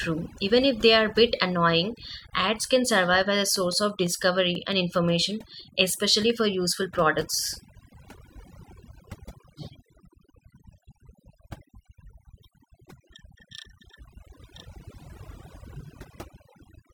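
A speech recording that carries overdone noise removal from start to finish. The noise reduction was pushed hard enough that individual frequency bands are dropped out wherever they sit close to the estimated noise floor, so the background collapses to near silence broken by twinkling, warbling specks. The same gating strips the quieter components of the voice, with soft consonants and low-level detail partly eaten away. Separately, a train of clicks runs from 3.56 s to 4.73 s, starting after "can survive as a" and ending before "information especially for useful". It is a run of about seven similar pulses at a regular six clicks per second, peaking roughly 5 dB above the speech, heard as steady ticking laid over the voice. The even spacing and uniform shape likely point to electrical interference from nearby equipment or a faulty connection or power supply.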